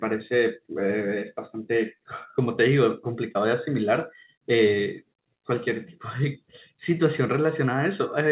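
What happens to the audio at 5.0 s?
Nothing goes wrong at 5.0 s: the speech carries straight through that moment with no dropout, glitch or distortion, and only the narrow telephone-style band of the call path's G.711 coding, with nothing above 4 kHz.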